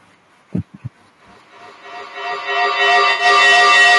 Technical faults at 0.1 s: low-delay AAC compression

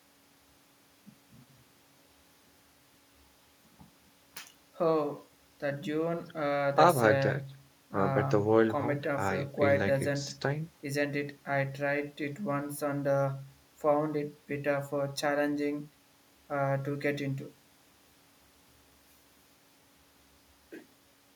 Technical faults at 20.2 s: none

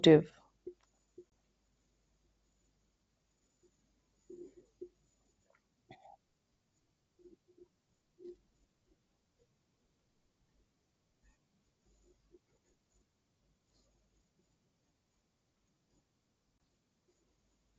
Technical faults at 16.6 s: packet loss on an ADPCM call

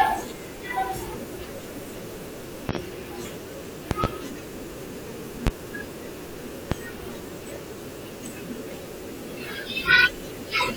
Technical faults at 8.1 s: none

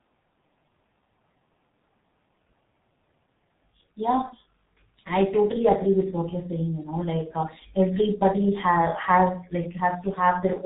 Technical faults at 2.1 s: G.723.1 codec

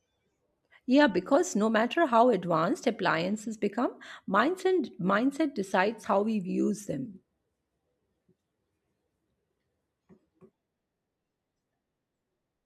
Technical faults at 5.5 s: none

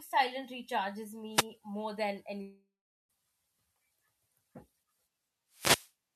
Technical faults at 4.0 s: none

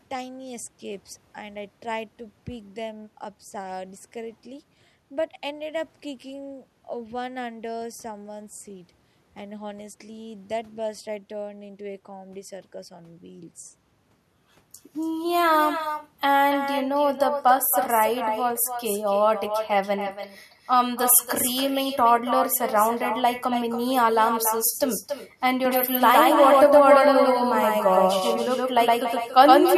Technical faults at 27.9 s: echo with no canceller; doubled audio track

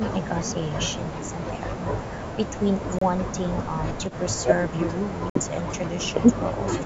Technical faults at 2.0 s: none

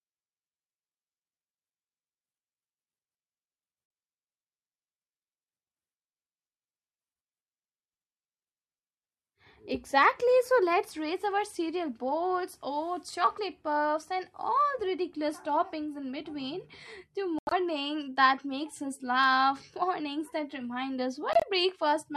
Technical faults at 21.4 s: corrupt frame muted

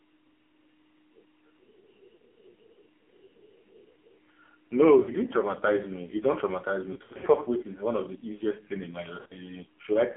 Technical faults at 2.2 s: AMR narrowband mobile codec; lost AMR speech frames

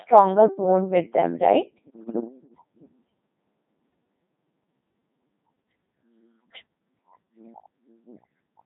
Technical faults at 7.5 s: Codec 2 vocoder

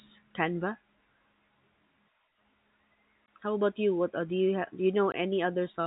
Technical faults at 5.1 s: packet loss filled with silence

